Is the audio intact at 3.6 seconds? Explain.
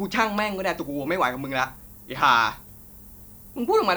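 No. At 3.6 seconds, as across the whole clip, the speech carries low bit depth with noise shaping. Only 9 bits are used, and the rounding error is pushed upward, giving a thin hiss some 25 dB below the speech. On a spectrogram it shows as a steady haze brightening toward the top band.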